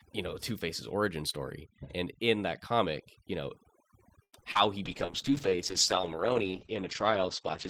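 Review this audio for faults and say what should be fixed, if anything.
Overdone noise removal runs through the whole speech clip. The suppressor is cutting individual frequency bands hard wherever they sit near its noise estimate, so the background collapses to near silence with twinkling specks, and quieter voice components vanish. Prevention: lower the suppression depth or add a spectral floor.

A short stall from a late packet occurs at 4.23 to 4.35 s. The jitter buffer emptied, and the receiver held the last sound for 92 ms until the packet arrived, then resumed from the same point. Nothing is lost, but the sound drags, and playout delay grows by 92 ms. Prevention: keep a slightly deeper jitter buffer margin on this link.

Short concealed packet loss occurs twice. At 4.41 to 4.44 s, 20 ms of audio went missing and was covered by 11 ms of extrapolated sound. At 4.52 to 4.57 s, 60 ms was lost and 33 ms was synthesized, cutting delay by about 30 ms. 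Both are heard as brief smears. Prevention: enable in-band FEC or redundancy for loss bursts.

A call bitrate drop starts at 4.86 s and lasts to the end. The encoder fell from 40 to 9 kbps and stayed at the lowest rate for 2.8 s, with audio bandwidth narrowing from 20 kHz to 8 kHz. The speech turns muffled and coarse. Prevention: tune bandwidth estimation so it backs off less sharply.

A jitter buffer slow-down runs from 5.05 to 5.58 s. The receiver repeated pitch periods to rebuild its reserve, adding 41 ms and playing at 94% speed. Sounds are drawn out at unchanged pitch. Prevention: let the buffer refill gradually during pauses rather than mid-speech.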